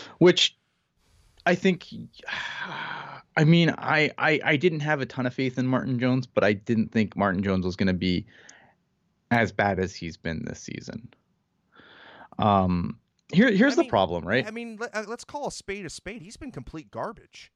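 Two sharp, isolated clicks interrupt this speech recording, one at 9.35 s just before "bad as he's been" and another at 10.62 s right after "as he's been this". Each is a single hard tick with no gap in the sound. The likely cause is dropped samples: a fraction of a millisecond of the stream went missing, so the waveform leapt abruptly to a later value and produced a brief broadband snap.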